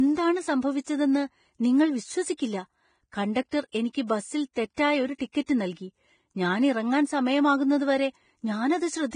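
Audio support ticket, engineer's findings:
Likely Vorbis compression, heavy, fitting roughly 23 kbps: treble coarsely quantised, nothing above 9.7 kHz. Whole clip, speech hissy and grainy, attacks blurred.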